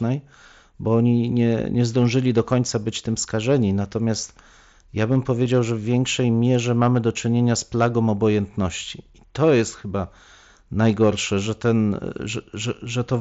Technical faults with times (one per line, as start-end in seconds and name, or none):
5.45 concealed Bluetooth headset packet loss